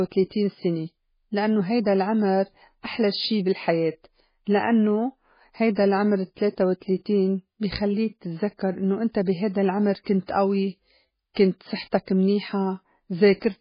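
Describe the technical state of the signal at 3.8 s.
At 3.8 s the speech carries MP3 compression damage that runs through the whole clip, heavy enough to point to a very low bitrate, around 16 kbps. The encoder likely ran short of bits, so it removed everything above 5 kHz and dropped weak frequency lines that flicker on and off between frames. The result is a watery, swirling texture with smeared consonant attacks. A plain low-pass filter would sound dull but steady, without this churning.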